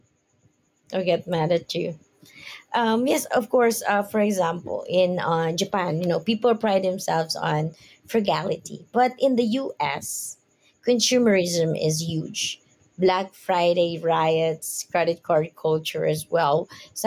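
Gain pumping runs through the whole speech clip. Between phrases the gain swells up, then ducks by roughly 5 dB each time the talker gets loud. Loud and soft passages sit closer in level than they should, giving a squashed sound. The likely cause is input gain set far too high, with a fast limiter clamping every peak. On a waveform the envelope looks flattened; on a spectrogram the level brightens in gaps and darkens under speech.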